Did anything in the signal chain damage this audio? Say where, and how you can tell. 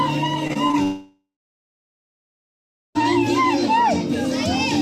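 Yes, the damage is in the network stage. Between 0.47 and 0.75 s, repeated packet loss left four short gaps, the longest 24 ms, each patched by stretching the preceding sound. About 28% of that span is concealed, so it turns choppy and robotic.

From 0.83 to 2.98 s, roughly 2.1 s of audio never arrives, likely a long network dropout. The last sound is carried on briefly as a fading buzz, then about 1.7 s of silence follows before the audio resumes with that section missing.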